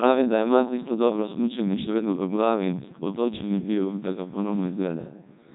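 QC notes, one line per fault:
Throughout: Codec 2 vocoder. The speech is robotic and buzzy because the signal went through a very low-rate vocoder, which sounds like roughly 1.2 kbit/s. Only pitch, voicing, energy and a rough spectral envelope survive, and the decoder rebuilds the voice from sine waves. On a spectrogram the harmonics appear smeared and over-regular with nothing above 3.8 kHz, and the waveform no longer resembles natural speech.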